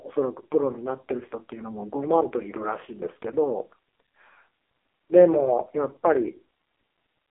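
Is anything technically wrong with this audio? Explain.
Yes. Throughout the clip, the speech carries AMR narrowband mobile codec damage. Content sits within a 300 Hz to 3.4 kHz telephone band, with nothing above 3.7 kHz. Heavy pulse-excited vocal-tract modelling makes it buzzy and synthetic, which fits AMR-NB's low 5.15 kbps mode.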